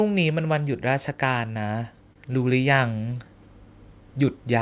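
From 0.32 s to 3.34 s, automatic gain rising lifts the level by about 6 dB. Voice and background noise swell together, so it is the gain control reacting, not the speaker getting louder. At 2.13 to 2.18 s, a short stall from a late packet holds the sound for 26 ms. Nothing is lost; speech resumes where it paused, so it sounds like a brief drawn-out sound rather than a skip. Between 2.62 s and 3.18 s, scattered short gaps appear as roughly four tiny concealed holes, the longest around 15 ms. They come through as separate ticks and smears spread across the span, unlike the single held stretch before them. Throughout, the call path carries nothing above 4 kHz, which fits G.711 A-law telephone coding.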